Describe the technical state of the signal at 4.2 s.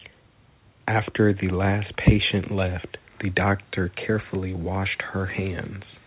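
At 4.2 s the signal is intact, with only the faint room noise sitting about 42 dB below the speech and the normal 4 kHz band limit of the G.711 mu-law call path.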